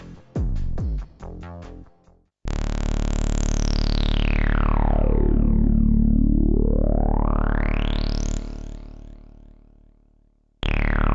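No technical fault can be heard anywhere in the audio. Nothing in it calls for a cause or a time to be pinned down.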